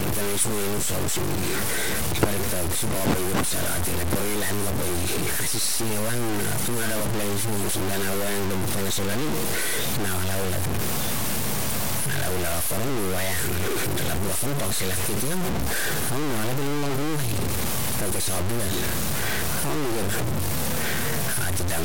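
Throughout the speech, harsh grain follows each syllable and drops to silence or sputters in pauses, unlike steady hiss. The likely cause is low bit depth without dither, consistent with about 4 bits.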